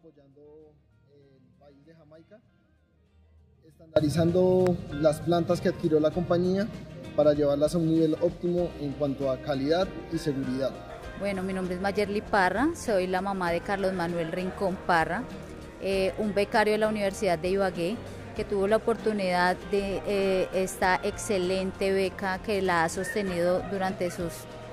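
The audio opens mid-dropout: from the start until 3.96 s the signal has fallen away to a faint residue, roughly 30 dB down, before snapping back. That's an audio dropout to a faint residue, likely a brief loss of the feed while the downstream path stayed live. Shortly after, between 4.67 and 4.69 s, there's a single loud pop that jumps well above the surrounding level while the sound keeps going underneath, likely a voltage spike from a connector, switch or driver glitch.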